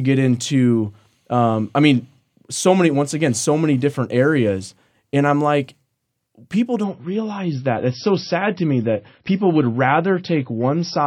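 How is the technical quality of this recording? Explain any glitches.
There's one glitch: from 6.84 s to the end, an adaptive stream at a lower bitrate kicks in. The speech suddenly goes dull and swishy with nothing above 5.8 kHz, which points to a drop from roughly 128 to about 25 kbit/s MP3, with no gap.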